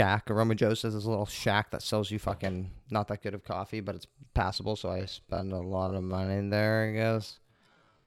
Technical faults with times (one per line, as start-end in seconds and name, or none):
4.91-8.07 time-stretched section